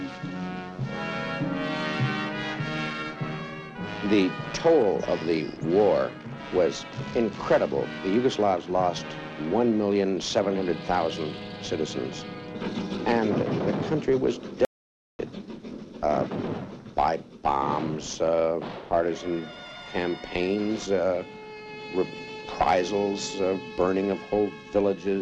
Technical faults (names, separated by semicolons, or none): audio dropout to silence